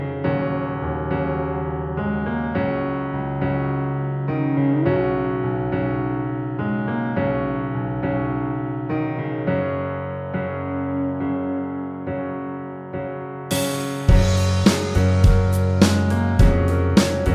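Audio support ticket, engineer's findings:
No audio faults found in this recording; nothing to report for the ticket.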